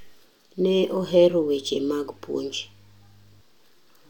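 From 1.0 s to 3.41 s, mains hum sits under the speech. It is a steady low tone at 50 Hz, with some low harmonics above it. Power-line current has leaked into the signal path, through a ground loop or a nearby transformer. It runs roughly 30 dB below the speech.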